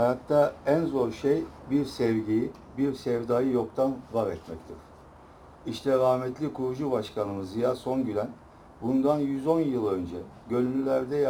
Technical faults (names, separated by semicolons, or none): crude rate conversion